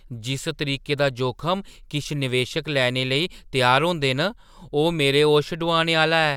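Nothing in the recorded speech registers as a technical fault at any point.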